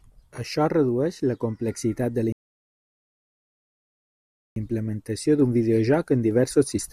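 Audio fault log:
2.32–4.56 s, rebuffering stall: after "la complexitat de la" the speech drops to silence for 2.24 s, then continues at "implementació d'un" with nothing missing. Playback exhausted its downloaded audio and waited for more data, so the stall adds time without losing content.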